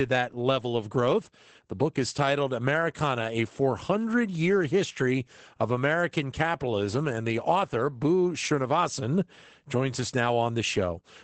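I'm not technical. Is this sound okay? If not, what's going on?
No. Throughout the speech there's Opus voice compression, squeezed hard to save data. Everything above about 8.8 kHz is missing, so the voice sounds muffled, and the coarse coding of its texture adds a hoarse, slightly robotic edge from start to finish.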